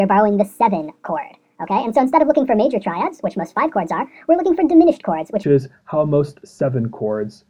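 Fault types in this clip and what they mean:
Section at the wrong speed: from the start to 5.44 s the sound runs 1.52 times too fast, hurried and raised roughly seven semitones, pitch and tempo shifting together, then returns to normal; likely caused by playback or editing against a mismatched clock.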